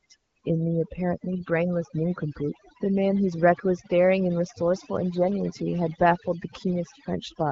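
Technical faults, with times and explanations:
Throughout, overdone noise removal: the denoiser was pushed far too hard, so any frequency band sitting close to its idea of the noise floor gets clamped down or switched off entirely. That leaves the background in the gaps between phrases lowered and broken up into little twinkling specks, and it eats the quieter parts of the speech too. The AMR-WB coding at 12.65 kbit/s adds only light damage of its own.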